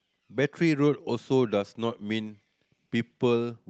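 A speech recording that came through a call path, with nothing technically wrong to hear anywhere in it.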